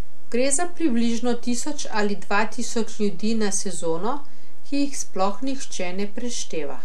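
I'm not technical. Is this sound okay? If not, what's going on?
No, there is a DC offset running through the whole speech clip, from start to finish. The entire waveform sits shifted to one side of the centre line instead of swinging evenly around it. You can't really hear this as a sound of its own, which is what sets it apart from hum or rumble: those are audible low tones, while this is a fixed lean. It wastes loudness room and can cause clicks when edited.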